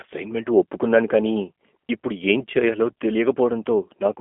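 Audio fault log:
throughout, G.729 codec: the speech has been rebuilt from a vocal-tract model and a few excitation pulses per frame rather than carried as a waveform, which fits an 8 kbit/s G.729A stream. The sound sits in a narrow line band of about 250 Hz to 3.4 kHz, with nothing above 3.5 kHz, and carries a plainly audible rough, buzzy, synthetic edge. That roughness is what separates it from a clean telephone-band filter, which would only sound thin.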